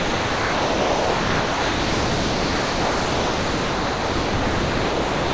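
From 0.00 s to the end, the sound never gets through: the whole clip is steady comfort noise in place of the real audio. This is sound dropped by the voice detector, likely because the sender treated the sound as background and stopped transmitting, leaving the receiver to fill the gap with synthetic noise.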